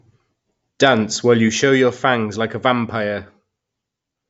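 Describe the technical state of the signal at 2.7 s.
At 2.7 s the speech signal is intact, with no audible fault at that moment.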